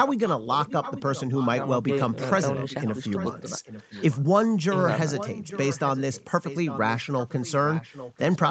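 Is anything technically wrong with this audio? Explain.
Yes, there is an echo leak, from 0.08 to 1.48 s, 2.09 to 4.47 s, and 5.16 s to the end. The far side's echo canceller likely missed loudspeaker pickup, so a faint copy of the speech trails about 0.85 s behind.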